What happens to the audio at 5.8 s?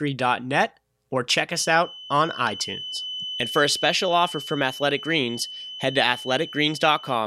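At 5.8 s the speech is accompanied by a feedback whistle, most likely because the loudspeaker-to-microphone loop is sitting right at the edge of instability: one frequency keeps recirculating at just enough gain to persist without building up. A thin, steady tone at 3 kHz runs underneath the speech, sitting well below it and wavering slightly in level. It starts at 1.45 s and carries on to the end of the recording.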